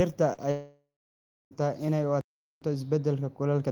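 At 0.33 to 0.39 s, about 40 ms of the speech failed to reach the decoder in time, a short concealed packet loss. The receiver extended the preceding sound to bridge the gap and then rejoined the real signal, leaving a brief smear in the voice.

From 0.51 to 1.53 s, roughly a second of audio goes missing, most likely a long network dropout. A concealment tail fades away and about 0.66 s of silence follows before the speech resumes at "inay u", with the missing stretch never recovered.

At 2.21 s, just after "inay u", the output stops dead for about 0.41 s until 2.62 s, probably a playback stall in which the player ran out of data or was held up. The speech breaks off mid-flow, then carries on.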